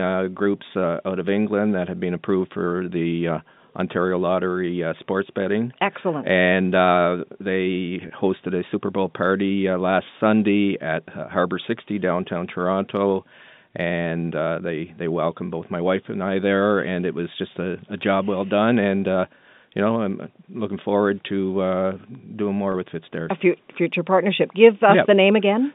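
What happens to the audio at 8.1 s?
Packet loss with pitch repetition occurs from 8.08 to 8.1 s, between "uh they" and "hosted a". The 20 ms gap, which fits one lost packet, was filled by repeating the last pitch period, so the sound briefly holds with a slight buzz.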